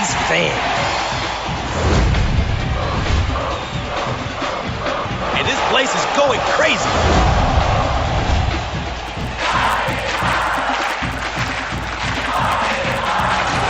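Resampler restarted on every block, from 9.06 s to the end: the audio was converted in separate 10 ms blocks, each processed as if nothing came before or after it. At every block boundary the converter lacks the true neighbouring samples, which leaves a small error at each edge. With blocks this short, the errors repeat at 100 Hz and merge into a steady buzz that sounds only while the audio is present. The conversion appears to be an upsampling, consistent with 16 kHz to 48 kHz.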